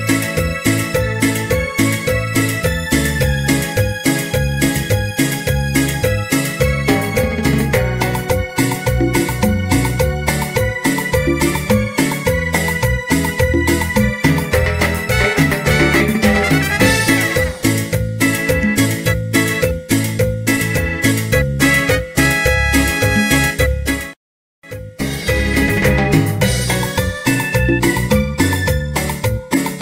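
No technical faults can be heard anywhere in this recording. Nothing in the sound stands out as a problem.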